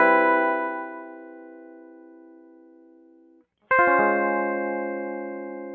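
A noise suppressor applied to music runs through the whole clip. The speech-tuned processing treats sustained tones and decay as noise, so the level swings by roughly 15 dB, with attacks passing while held material and tails sink, leaving the music pumping and thinned. Sound cut by the noise suppressor is clearest from 0.84 to 3.44 s, where steady and fading parts drop by as much as about 9 dB and decays are clipped short. The call microphone processing band-limits everything to 8 kHz.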